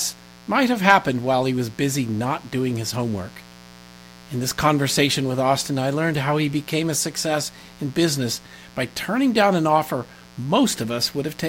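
Switching spikes from a 60 Hz mains supply leak in throughout, producing mains buzz: a steady, raspy harmonic drone about 25 dB below the speech.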